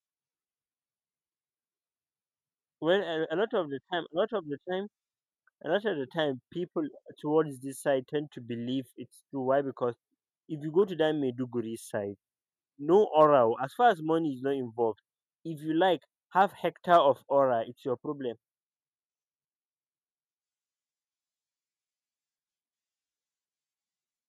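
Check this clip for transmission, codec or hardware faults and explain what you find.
Two faults are audible: coding damage throughout the speech, and two short bursts of DAB burbling.

MP2 compression runs through the whole recording. Its likely cause is MPEG Layer II coding at a low rate, and the damage points to about 80 kbps. Too few bits reach the 32 sub-bands. Upper bands drop out and flicker back, so the speech sounds dull. The bands that remain are coarsely quantised. That adds a plainly audible gurgling, granular edge.

DAB burbling strikes at 8.90 s, between "side tend to believe" and "it's true". It returns at 10.82 s, between "if you go" and "to that". Bit errors, a small fraction of the stream, slipped past error correction into the MP2 data. Corrupt samples put short blips of noise in single sub-bands. The sound points to nine frames hit the first time and seven the second. 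Each burst gives short blips of noise over the speech.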